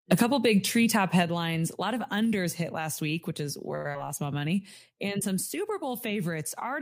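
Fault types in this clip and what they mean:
Microphone overload: input likely set too hot, so peaks near 0.11 to 0.22 s get flattened, running about 4 dB past the converter's limit and adding a harsh crackle.
Microphone volume stepped down: the call software likely cut input gain in single steps, about 3 dB at 0.22 s and about 5 dB at 1.24 s after "big treetop".
Short stall from a late packet: after "last week which is" at 3.75 s, the receiver holds the last sound for 93 ms waiting on a late packet, then carries on with nothing lost.
Skip ahead: at about 3.93 s playback jumps forward, dropping roughly 70 ms of audio and splicing the two sides together almost directly.
Jitter buffer slow-down: after "lost my", from 4.39 to 4.8 s, the receiver repeats tiny slices to rebuild its reserve, so the audio drags at 89% speed, same pitch, 54 ms added.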